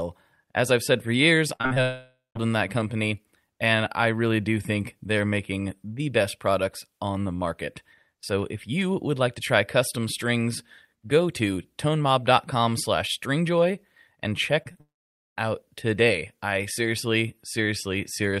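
Speech, with network faults clustered in two places. Right after "I've said for years", 1.55 to 1.78 s has repeated packet loss (robotic sound): four gaps, the longest 40 ms, with nearly half the span filled by continued sound, giving a choppy stutter with pieces missing rather than one clean break. From 1.82 to 2.37 s comes a long network dropout, likely from a stalled connection: the last sound is stretched into a fading buzz, then about 0.18 s of silence, with roughly 0.54 s of audio gone. Unlike the stutter, this is one continuous hole. After "slash stringjoy and", short concealed packet loss occurs at 14.63 to 14.67 s and 14.73 to 14.77 s, each about 20 ms patched into a brief smear or wobble. A second long network dropout follows from 14.81 to 15.38 s, about 0.56 s lost with nearly half a second of silence, before audio resumes at "out today I seriously".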